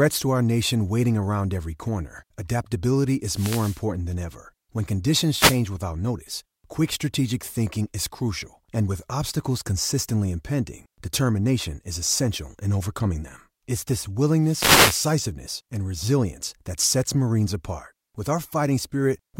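Wireless microphone noise hits occur at 3.27–3.83 s, after "around every corner adaptability", at 5.32–5.61 s, before "without notice quick strategic", and at 14.40–15.16 s, before "and resilience that sets". Each time the FM radio link fades and receiver noise rises as a brief swish of static over the speech.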